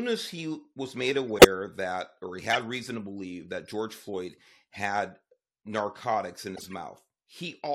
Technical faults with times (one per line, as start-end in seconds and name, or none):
1.36-1.45 corrupt frame decoded
2.53-2.55 corrupt frame decoded
4.73-4.75 corrupt frame decoded
6.55-6.73 corrupt frame decoded